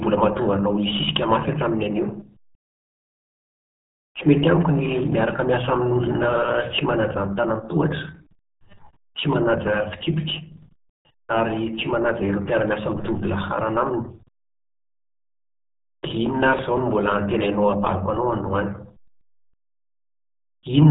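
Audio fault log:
Throughout: RealAudio 14.4 codec. The speech is muffled and gargly, with nothing above 3.9 kHz, which fits an 8 kbit/s dial-up-era stream. On a spectrogram, energy stops at a hard ceiling near 3.9 kHz, and harmonics below it look smeared and blotchy from heavy coding damage.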